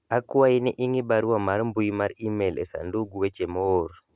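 Nothing in this speech recording points to a technical fault. There is no moment in the audio that calls for a time or an explanation.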